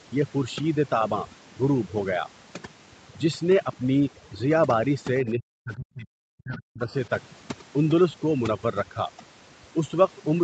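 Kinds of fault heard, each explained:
Overdone noise removal: aggressive noise reduction mutes bands near its noise estimate, leaving near-silent background with twinkling specks; spectrogram shows scattered isolated dots.
Speech suppressed in double talk: from 5.22 to 6.81 s the speech dips by roughly 40 dB, likely an echo canceller mistaking overlapping talk for echo; waveform shows the level dropping.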